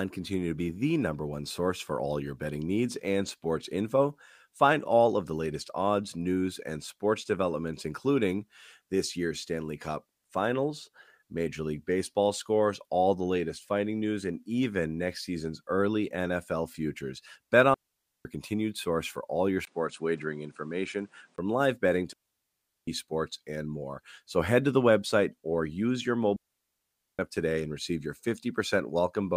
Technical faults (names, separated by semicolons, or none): digital wireless dropout; input switched to a poorer device